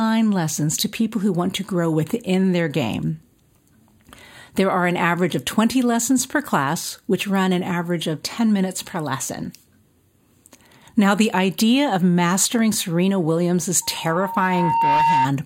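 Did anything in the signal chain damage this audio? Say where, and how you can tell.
Yes. Loudspeaker feedback squeal in the analogue stage: the microphone picks up its own loudspeaker. A steady 918 Hz tone appears at 13.82 s. It swells over about a second and holds to 15.28 s, roughly 5 dB above the speech. Loop gain there exceeds one.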